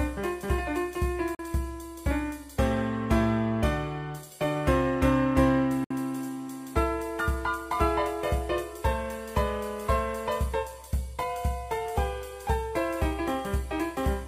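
At 1.35 s the sound drops to silence for 0.04 s. At 5.84 s it goes silent again for 0.06 s. Each time, playback resumes further along, as if it had kept running. This is likely a Bluetooth dropout, where packets never reached the headphones.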